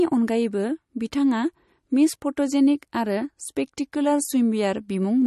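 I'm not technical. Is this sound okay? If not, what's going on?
No, not quite. All the way through this speech clip there's a watery, swirly quality, most likely from MP3 compression squeezed too hard. To save space, the encoder throws away the very top of the sound, so nothing comes through above about 12 kHz, and it drops quieter details that then flicker in and out. That's why the s sounds come across metallic and the whole thing feels dull and smeared.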